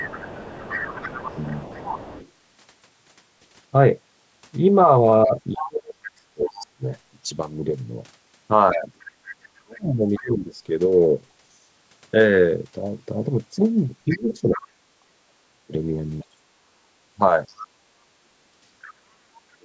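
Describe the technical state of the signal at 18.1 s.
At 18.1 s the main voice sits inside a stretch of speech suppressed in double talk, running from 14.07 s to the end of the clip. It dips in pieces by as much as around 40 dB, likely because the echo canceller could not tell it from the loudspeaker signal. On a waveform this shows as sudden notches in the envelope.

The other side's voice is leaking through from 14.1 s to 18.92 s, around 15 dB below the main speech. On a spectrogram it appears as a faint second set of harmonic traces.

The background is gated by the echo canceller between 16.27 s and 18.49 s, dropping by about 9 dB in brief dips. The waveform shows short flattened gaps in the noise floor, and the spectrogram shows momentary darker bands across the room noise.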